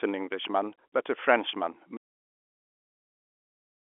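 Speech over a telephone line stops abruptly at 1.97 s and never returns: from that point to the end the audio is silence, with no line hiss or room tone, so whatever followed is simply missing. This is an audio dropout to silence, most likely the input being lost, through a disconnected device, a broken link or an accidental mute, while the recorder kept writing silence. Before the cut, the sound carries the narrow band of G.711 telephone coding, with nothing above about 3.7 kHz.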